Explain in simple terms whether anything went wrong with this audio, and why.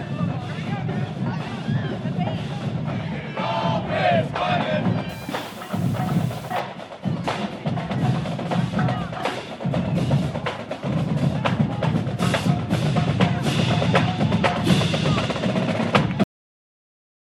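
Two things go wrong. From 5.09 to 6.59 s the sound turns grainy and rough, most of all in its quieter parts. That is low bit depth without dither. The audio was likely stored with too few steps, around 7 bits, and rounded with no smoothing noise.

The audio then has a cut-off end. At 16.24 s it stops in the middle of a sound and drops straight to dead silence, with no natural fade. The last stretch of audio was never written out.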